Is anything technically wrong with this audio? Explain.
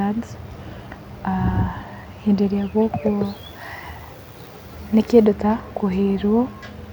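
Yes. From 3.25 to 5.25 s, pre-emphasis was left on: the treble boost, matching the CD 50/15 µs curve, was never undone, leaving 10 kHz about 8 dB hot, so the speech turns thin, bright and sibilant.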